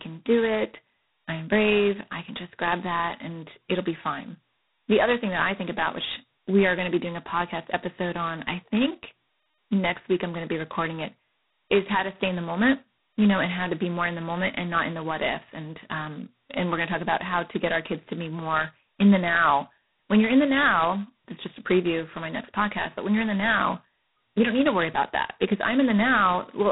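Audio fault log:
Throughout: G.726 ADPCM, and a pretty rough setting of it. The speech carries a harsh, rasping hiss that rises and falls with its level, getting loudest on the strong syllables. That's what happens when each sample only gets a couple of bits to describe how far it strays from an adaptive prediction, which fits the 16 kbit/s mode. Nothing comes through above about 3.9 kHz, so the whole thing sounds boxed-in, like telephone audio.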